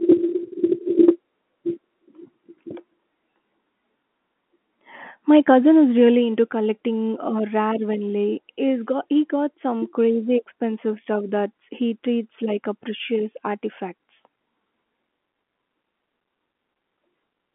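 Nothing goes wrong in this one; the speech just carries the narrow feel of an ordinary phone line, with nothing above about 3.8 kHz.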